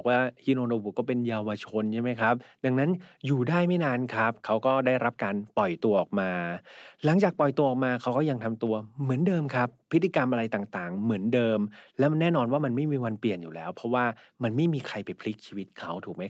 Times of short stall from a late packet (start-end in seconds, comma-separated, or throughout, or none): none